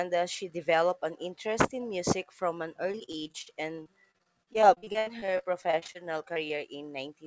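Speech carried over a call link, where the sound has nothing above 8 kHz, which points to a wideband codec such as G.722. From 2.92 to 5.96 s it turns choppy and robotic, with pieces of sound missing. This is repeated packet loss: the audio arrived in packets, and they kept going missing or arriving late, leaving a new hole roughly every tenth of a second. The longest hole was about 80 ms. The receiver patched each one by stretching the last bit of sound it had, so about a fifth of that stretch is synthetic filler rather than the original speech. Later, at 6.34 to 6.38 s and again at 6.48 to 6.52 s, there are two brief smears, each like a small wobble. Each is short concealed packet loss: about 20 ms of audio never reached the decoder in time. The gap was filled by continuing the preceding sound, using its pitch if it was voiced or shaped noise if not, and then blended back into the real signal, so a short consonant there can drop out.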